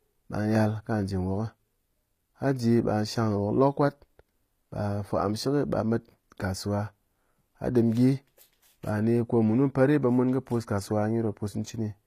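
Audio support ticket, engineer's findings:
Gritty, lispy s sounds throughout the speech; treble stops at 14.9 kHz. Likely HE-AAC at a low bitrate, around 24 kbps: copied-up bands, unlike a plain low-pass, which leaves dull rather than metallic highs.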